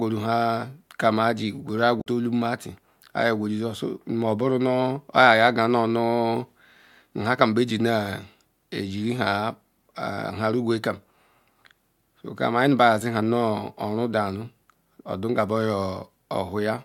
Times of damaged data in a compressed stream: 1.97-2.07

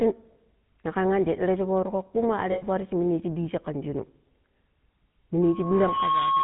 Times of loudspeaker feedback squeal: 5.42-6.44

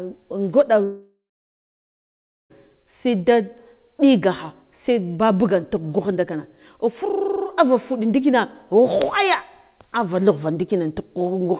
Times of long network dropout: 0.84-2.52

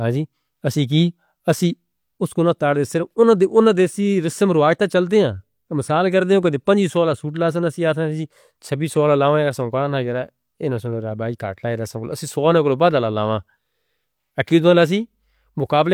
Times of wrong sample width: none

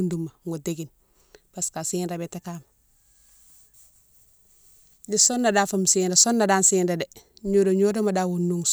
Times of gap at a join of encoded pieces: none

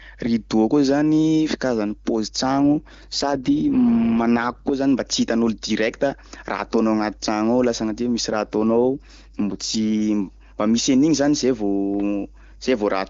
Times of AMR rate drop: 2.44-4.73, 8.30-9.85

